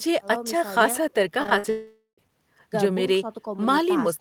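Speech runs cleanly until 1.43 s, when repeated packet loss (robotic sound) begins and lasts to 1.66 s. Four short holes, the longest about 51 ms, are each patched by stretching the preceding sound, so about 37% of that stretch is concealed. The result is a choppy burst with pieces missing. On a spectrogram it shows as smeared, frozen harmonic bands interrupting the normal formant movement, and the waveform shows repeated near-identical cycles where detail should be. Almost immediately, from 1.70 s to 2.19 s, the sound turns into a fading buzz or hiss that decays into about 100 ms of silence before the speech resumes. Roughly half a second of audio is simply gone, which is likely a long network dropout. The spectrogram shows a flat, decaying smear tapering to an empty band, and the waveform shows a shrinking envelope collapsing to a flat line before the speech returns.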